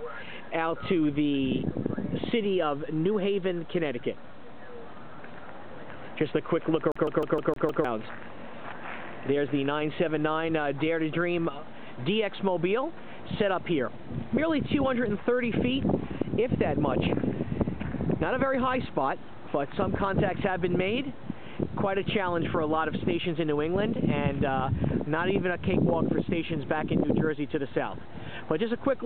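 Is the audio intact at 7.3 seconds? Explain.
No. At 7.3 s the audio is caught in a CD stuck on one turn, from 6.92 to 7.85 s. A scratch keeps throwing the laser back to the same spot. One 155 ms slice repeats six times, with a brief mute at each jump. It sounds like a fast, even stutter.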